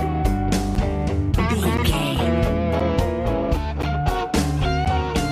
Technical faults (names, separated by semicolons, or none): periodic USB or driver dropouts